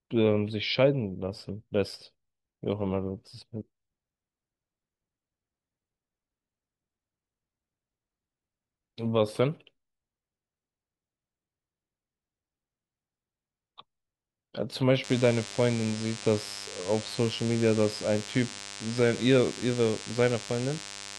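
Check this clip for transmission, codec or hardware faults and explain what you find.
There's one fault here: a DECT cordless phone buzz that comes in at 15.04 s and runs to the end of the speech at 21.18 s. A nearby DECT handset or base is firing radio bursts a hundred times a second, and something in the audio chain is rectifying them into sound. You get a thin, steady 100 Hz buzz with lots of harmonics sitting only around 15 dB under the speech.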